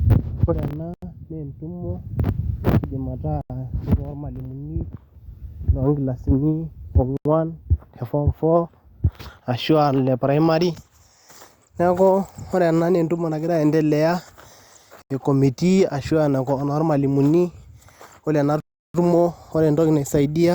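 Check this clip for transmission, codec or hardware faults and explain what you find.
The speech is broken by a block of digital silence, recurring five times.

Gaps of about 85 ms occur at 0.94–1.02 s, 3.41–3.50 s, 7.17–7.25 s and 15.02–15.10 s, and a longer 341 ms gap runs from 18.60 to 18.94 s, between "ore ena" and "tumo ore entoki". The playback likely failed to fill its output buffer in time, so whole buffers were sent as zeros. The 85 ms length fits a 4096-sample buffer, and the long gap fits four of them. Each short gap is a brief hole, while the long one is a longer dropout. On a waveform, the signal falls to a near-flat line with no fade. On a spectrogram, each gap is a hard-edged empty vertical band.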